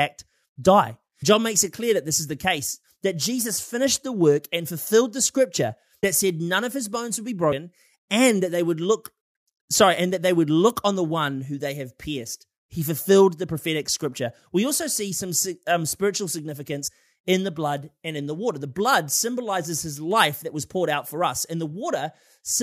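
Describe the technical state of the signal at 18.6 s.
At 18.6 s the speech signal is intact, with no audible fault at that moment.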